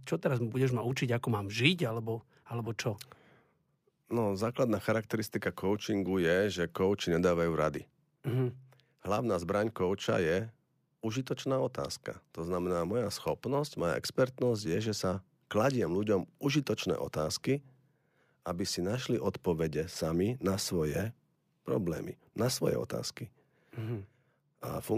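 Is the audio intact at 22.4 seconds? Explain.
Yes, the speech at 22.4 seconds plays through cleanly, with no audible fault at that moment.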